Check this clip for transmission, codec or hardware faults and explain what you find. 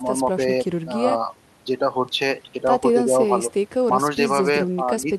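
No transmission, codec or hardware faults can be heard in this speech clip. The audio comes through with no audible disturbance at any point.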